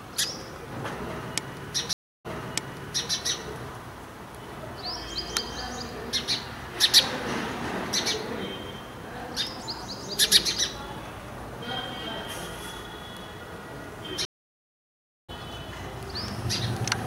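At 1.93 s a stream reconnect occurs. The connection drops, and the player restarts its decoder. After 0.32 s of silence, the audio resumes 0.88 s earlier, repeating a stretch. At 14.25 s another reconnect leaves 1.03 s of silence. Playback then jumps roughly 0.7 s ahead, skipping material.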